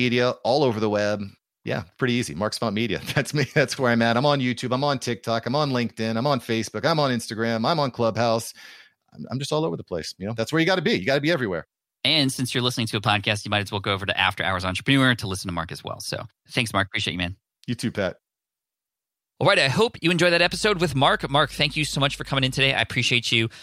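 Just after "hope you enjoyed that", from 20.43 to 22.73 s, mains hum appears beneath the speech: a steady low tone at 50 Hz, sitting roughly 20 dB below the speech. Power-line current has leaked into the signal path, as happens with a ground loop or a nearby transformer. Unlike handling noise or wind rumble, which wander and thump, this holds one fixed pitch with no change in level, so it reads as a drone rather than noise.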